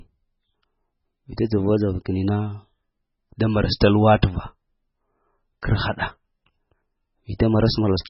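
MP3 compression is the likely cause of the damage heard across the whole speech clip. Nothing is present above 5.6 kHz, so the treble stops at a hard ceiling, and the heavy damage fits a very low bitrate of around 16 kbps. With so few bits, the encoder discards the weaker frequency lines, and they flicker in and out from frame to frame. That gives the voice a watery, swirling quality, and sibilants turn metallic and chirpy.

Pre-echo appears at 5.62 s, where a brief hiss of about 10 ms runs ahead of a sharp onset. The codec spreads its quantisation noise across an entire block. Because this attack lands late in its block, noise scaled to the loud part spills into the quiet instant just before it, so the attack arrives softened and smeared instead of clean.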